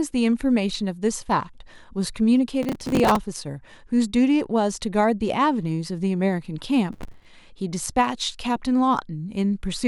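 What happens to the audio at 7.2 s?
Processor overload crackle runs from 6.93 to 7.25 s, so 7.2 s falls near its end. The processor could not fill its short audio buffers, each around 5 ms, before their deadlines, and roughly thirty were missed in quick succession. Each miss replayed a scrap of old audio with abrupt edges, and these repeated fragments pile up into a gritty, tearing crackle laid over the speech that stops once the load eases.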